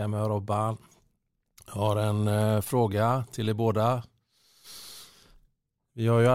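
No technical faults are audible anywhere in the speech recording.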